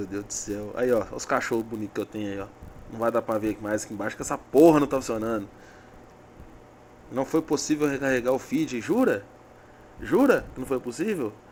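A steady 100 Hz buzz runs through the whole sound: a filter restarted on every block, its reset transient recurring every 10 ms and tracking signal level.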